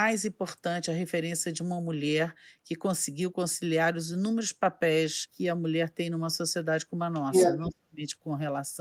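From 7.14 to 7.69 s, a second voice leaks through, so the other side's voice is leaking through. It sits somewhat louder than the talker, by roughly 5 dB. The likely cause is a loudspeaker echo that the echo canceller failed to remove from the microphone.

Right after, from 7.68 to 8.02 s, the talker's own speech is suppressed in double talk. It drops away sharply, by around 40 dB at its deepest, for about a third of a second in all. The canceller likely mistook the talker for echo and muted both.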